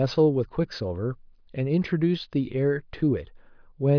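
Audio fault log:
Nothing to log here, since the speech comes across without any fault worth noting.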